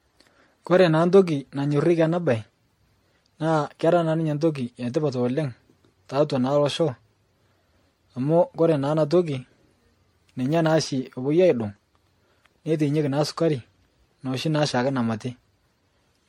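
Generation loss runs throughout the speech: the sound is swirly, smeared and hollow, with blurred attacks and nothing above 16.5 kHz. It is likely the result of being MP3-encoded around ten times near 64 kbit/s, each pass requantising on a shifted frame grid, so noise and spectral holes accumulate.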